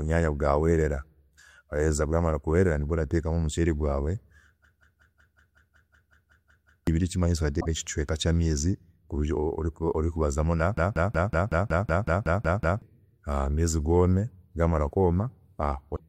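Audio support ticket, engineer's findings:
System hang loop: driver froze while the hardware kept cycling one 186 ms buffer, which fits 8192 samples. Machine-gun stutter at 5.38 Hz, 4.64–6.87 s after "omuceeri gwawe" and 10.77–12.82 s after "ekicweeka kiringana". About 2 s lost each.

Broken MP3 bit reservoir, likely: frames dropped, following 24 ms frames decode borrowed bytes from the wrong frame. Garbled skip ahead at 7.60–7.66 s before "ekicweeka kiringana", and at 15.95–16.00 s.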